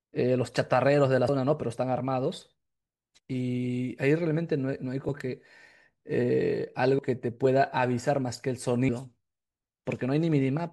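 At 3.19 s the speech skips forward. About a tenth of a second is gone, and the audio on either side is butted together with no gap of silence. The same jump happens again at 6.99 s. Both sound like audio missing between chunks. The likely cause is a recorder working in 2-second chunks that drops a short piece each time it closes one chunk and starts the next.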